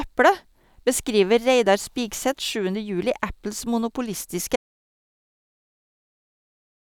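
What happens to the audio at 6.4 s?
At 6.4 s the speech is gone: an audio dropout to silence runs from 4.56 s through to the end of the clip. The sound cuts off mid-flow and what follows is silence, with no room tone or hiss. The likely cause is that the input signal was lost while recording carried on writing zeros. On a waveform the trace collapses to a flat line; a spectrogram shows an abrupt edge, then blank black.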